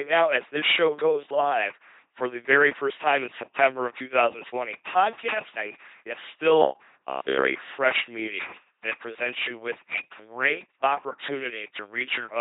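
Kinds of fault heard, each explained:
LPC-10 vocoder: The whole clip sounds like a 2.4 kbit/s LPC-10 vocoder. Each moment is rebuilt as either a buzz or a hiss through a small vocal tract filter. The speech comes out heavily damaged, flat and mechanical, with nothing above 3.9 kHz.
Robotic sound from repeated short buffers: From 6.62 to 7.48 s the speech turns into a rigid metallic buzz at 66.7 Hz. Most of that stretch sounds like the same slice played again and again. This is likely a 15 ms buffer being repeated while new audio arrives too late.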